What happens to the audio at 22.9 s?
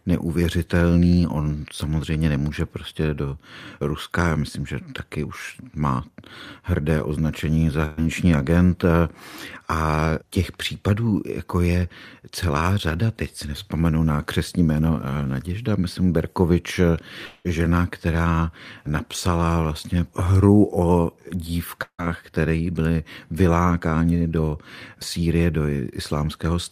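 Nothing goes wrong at 22.9 s; the speech there plays through intact, with no dropout, click, distortion or other fault.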